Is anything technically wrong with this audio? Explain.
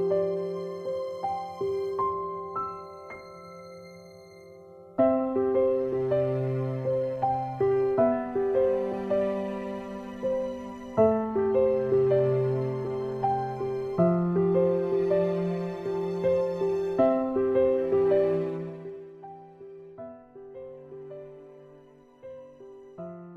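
Yes. There is zipper noise from 18.33 to 19.16 s. The level falls in coarse 2 dB steps, about fifteen a second, with no smoothing between them. Each jump puts a tiny click into the waveform. Over the drop of roughly 20 dB these clicks run together into a fast ticking, a zipping sound that rides on the audio while it fades.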